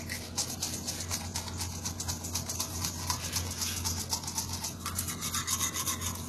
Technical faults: HE-AAC compression

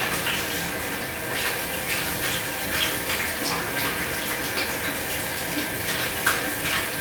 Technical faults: none

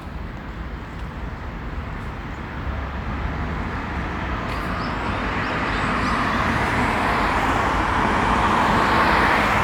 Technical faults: none

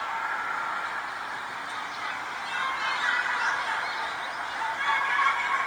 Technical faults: Opus compression

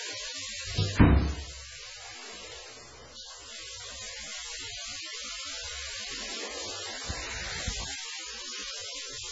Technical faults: MP3 compression

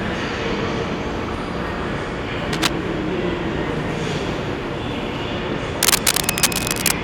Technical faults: cable scratch noise

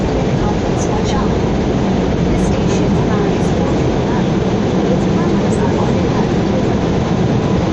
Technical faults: none

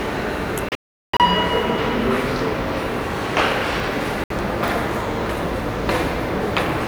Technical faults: digital broadcast dropout; chunks out of order

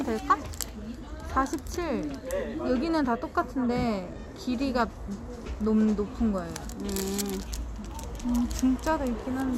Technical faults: none

